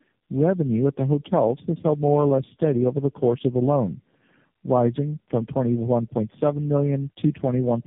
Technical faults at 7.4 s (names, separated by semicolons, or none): tandem speech coding